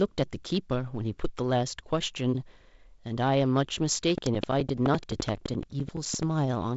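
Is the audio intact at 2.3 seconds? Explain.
Yes, at 2.3 seconds the audio is intact, with nothing beyond the light coding character of the G.722 wideband telephone path, whose band stops below about 7.7 kHz.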